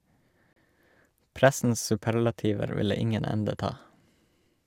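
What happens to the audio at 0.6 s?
A gap at a join of encoded pieces opens just before that point, from 0.53 to 0.56 s. The speech stops for about 33 ms, then resumes where it left off, because separately encoded segments were joined with their start delay and end padding left in.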